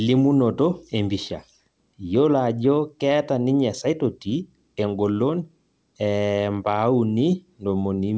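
Speech carried over a call codec that stops at about 8 kHz, with nothing technically wrong with it.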